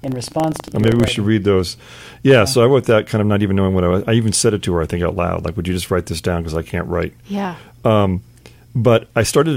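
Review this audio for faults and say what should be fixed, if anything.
From the start to about 1.2 s there's buffer tearing, a robotic 25 Hz buzz over the speech. The writer and reader of the ring buffer have slipped and cross every period, so a small slice of each one, roughly 3 %, replays audio from about 150 ms earlier with hard joins. The 25 Hz rate fits a 40 ms period. Keep the write pointer safely ahead of the hardware read position and resync it after underruns.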